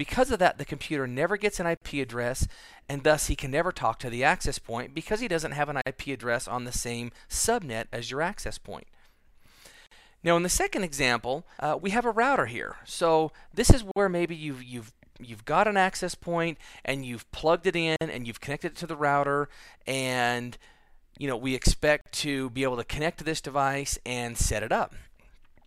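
Six short dropouts of about 45 to 49 ms cut into otherwise continuous sound at 1.77, 5.82, 9.87, 13.91, 17.96 and 22.01 s, roughly every 4 s. That's a gap at a join of encoded pieces: separately encoded chunks were stitched together untrimmed, leaving encoder delay and end padding.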